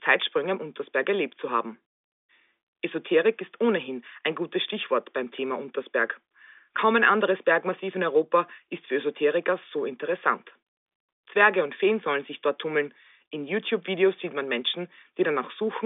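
Nothing goes wrong anywhere in this speech; it simply has the familiar sound of an ordinary phone line, with the G.711 mu-law telephone coding keeping it inside roughly 300 Hz to 3.6 kHz and leaving nothing audible above about 3.7 kHz.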